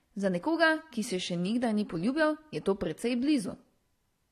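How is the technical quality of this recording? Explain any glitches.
The recording is compromised by stacked compression damage across its full length.

Transcoding between lossy codecs runs throughout the clip. The speech has likely passed through a low-rate AAC-LC stage and then been re-encoded as MP3, with the blurred swirl fitting roughly 32 kbit/s AAC feeding a 64 kbit/s MP3. The second encoder wastes bits reproducing the first one's smearing while adding its own grainy, warbling artefacts, so both textures sit together. Nothing survives above 14 kHz, leaving a dulled top end.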